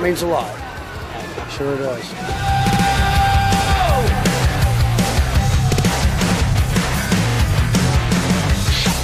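Repeated frames show up four times: at 0.98 to 1.04 s a 64 ms chunk plays one extra time, at 2.69 to 2.82 s and 5.72 to 5.84 s a 64 ms chunk plays twice more, and at 7.30 to 7.38 s a 43 ms chunk plays twice more. Each one's a stutter where a short run of compressed frames got written or sent again, so the decoder just replays that slice of audio. Altogether it stretches the clip by about 0.4 s.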